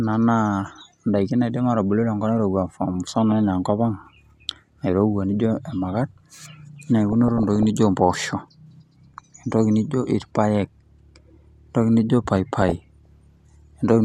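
Weak DAB reception lets bit errors corrupt the MP2 data, making single sub-bands jump in level from 7.09 to 7.65 s and, after "entoki nijo", from 12.62 to 13.06 s. This DAB burbling adds short blips of noise over the speech.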